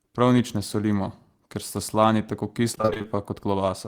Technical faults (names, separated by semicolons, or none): repeated packet loss (robotic sound)